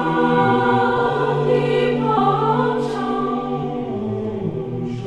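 A jump at 0.95 s, then a larger jump at 2.16 s, each skipping ahead, by roughly 50 ms and then 150 ms. These are compressed frames skipped: whole 23.2 ms frames never played, consistent with about two and then seven frames lost.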